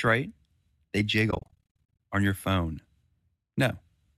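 Speech, with AAC frame loss with muting from 1.31 to 1.95 s, just before "on your phone". About 460 ms of audio drops to silence in short gaps of up to around 50 ms, scattered across roughly 740 ms. Each gap fades softly out and in, because the decoder zeroes the lost frames and the overlapping windows smooth their edges. The light roughness elsewhere is likely low-delay AAC compression.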